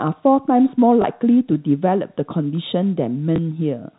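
Packet loss with last packet repeated: at 1.02 to 1.04 s and 3.36 to 3.38 s, one 20 ms packet went missing and was replayed, giving brief small blips over band-limited G.711 telephone audio.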